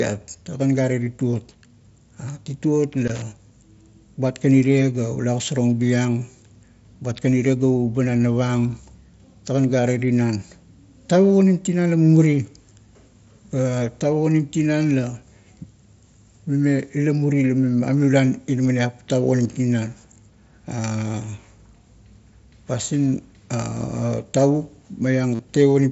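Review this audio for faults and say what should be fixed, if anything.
Concealed Bluetooth headset packet loss occurs at 1.04 to 1.06 s (about 22 ms), briefly at 19.45 s, and at 25.35 to 25.39 s (45 ms). In each case the receiver filled the gap by repeating the closest-matching recent stretch of waveform. The 45 ms run, which points to roughly six lost frames, is a steady buzzy tone at full level with a slight warble as real sound resumes. A dropout would fall to silence instead. Keep the phone close and free of interference so the link holds.

Loose connector crackle runs from 3.07 to 3.22 s, an irregular burst of scratching where a worn contact made and broke the signal. Unlike concealment buzz, it is ragged and uneven, with no steady pitch. Cleaning or replacing the plug and socket would stop it.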